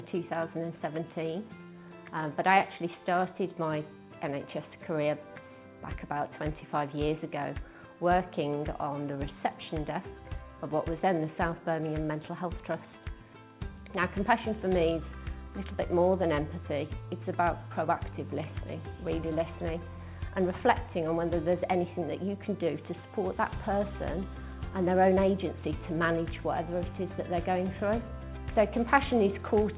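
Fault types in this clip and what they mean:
Nothing's wrong here, it just has that narrow phone-call sound from a G.711 call path, with nothing above about 4 kHz.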